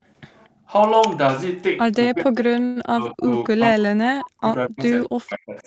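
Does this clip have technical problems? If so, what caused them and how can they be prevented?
Yes. Background gated by the echo canceller, 0.49 to 0.68 s: the room sound behind the speech dips by about 14 dB for roughly a fifth of a second, then returns. While the far end's audio was playing, the canceller turned the microphone down hard instead of subtracting only the echo. Prevent it by tuning the canceller's suppression to act less aggressively when echo is low.

Speech suppressed in double talk, at 2.07 to 2.36 s, 2.89 to 3.28 s, 3.53 to 4.47 s, 4.68 to 4.80 s, and 5.06 s to the end: the talker drops by around 20 dB in the first two stretches and by as much as 40 dB later, so parts of it nearly vanish. The likely cause is the canceller mistaking the talker for loudspeaker echo while both sides spoke. Prevent it with a canceller that has better double-talk detection, or with a headset so there is less echo to fight.

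Call audio freeze, 2.65 to 2.78 s: the sound is stretched into about 105 ms of filler, with nothing lost, and then continues from where it stopped, now slightly later. Delayed packets likely emptied the jitter buffer, and the receiver bridged the gap. Prevent it with a steadier network path or a larger jitter buffer margin.

Echo leak, 4.82 to 4.88 s: a faint copy of the speech, about 20 dB down and 231 ms late, slips through. This is likely echo from a loudspeaker that the canceller did not fully remove. Prevent it by lowering the loudspeaker volume or using headphones.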